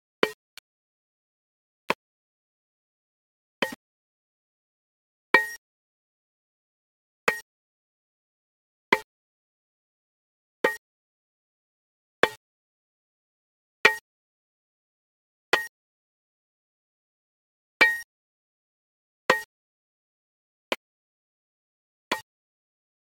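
Low bit depth without dither runs throughout this recording of sounds. Quiet passages turn gritty, and the error sits around 30 dB below the signal. The likely cause is requantisation to very few levels, consistent with 7-bit rounding, with no dither added first. Because each sample snaps to the nearest step, the error tracks the waveform instead of forming neutral noise, and detail smaller than one step is lost outright.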